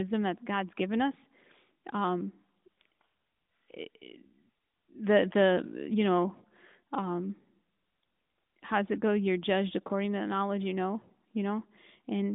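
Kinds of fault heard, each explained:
No kinds of fault are heard in this speech.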